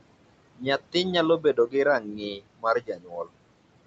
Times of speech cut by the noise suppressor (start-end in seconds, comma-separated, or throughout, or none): 0.56-0.66, 1.39-1.74, 2.00-3.30